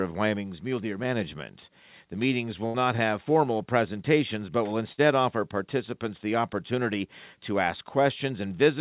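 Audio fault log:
2.66–2.76 s and 4.92–5.00 s, burst of packet loss: Two short runs of audio never arrived in time to be played. Each time, the receiver stretched the last sound it had, about 82 ms at the first gap and 57 ms at the second, fading it as it went, so it comes through as a brief held buzz or hiss. Playback then jumps ahead, skipping roughly 80 ms and 60 ms of the original sound.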